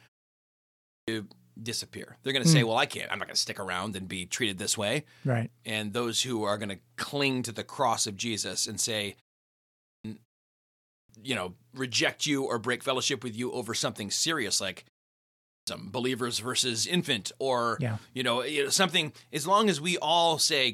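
Speech returns abruptly out of silence with its opening sounds missing, about half a second swallowed each time, at 0.61 s, 9.57 s after "and say", 10.62 s before "you know reject you", and 15.18 s between "over something serious like" and "believers versus infant or". This is clipped start after a pause: the output device sleeps during silence and wakes too slowly.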